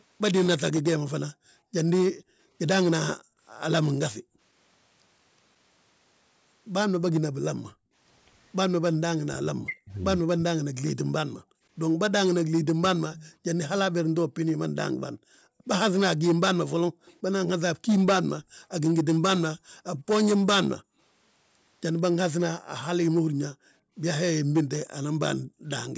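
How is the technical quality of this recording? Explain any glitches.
The recording has several echo-canceller glitches typical of a speakerphone call.

Background gated by the echo canceller occurs at 1.33–4.41 s, 7.73–7.93 s, 15.14–20.99 s and 23.53–25.64 s. The canceller ducks the microphone while the far end plays. Room sound drops by up to about 40 dB, then returns.

From 9.24 to 12.92 s the speech dips and breaks up, by roughly 40 dB for about two seconds in total. This is likely speech suppressed in double talk, with both sides talking at once.

An echo leak likely appears at 13.14–13.72 s and 17.05–17.13 s. A faint copy of the speech, delayed by 163 ms, comes back about 20 to 30 dB down.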